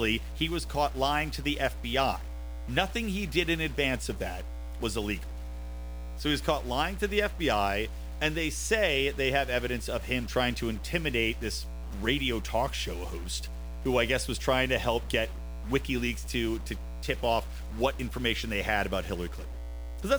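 A mains hum runs through the whole speech clip. It is a steady low tone at 60 Hz, with some low harmonics above it. It sits only about 10 dB below the speech, so it is clearly audible under every phrase. It comes from the power line leaking into the signal. A ground loop or a nearby transformer would couple it in. The hum does not change, so it is also heard in the pauses.

A stuck bit is also present from start to end. One data bit holds a fixed value instead of following the waveform. About half of the samples are then off by that bit's weight, which is around -45 dBFS. The likely cause is a broken data line or a converter fault. This adds noise that follows the shape of the speech. Quiet stretches are not clean either. Small values keep crossing sign, so the bit's error fills the pauses with noise.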